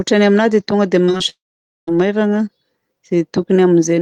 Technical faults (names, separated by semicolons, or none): short concealed packet loss; long network dropout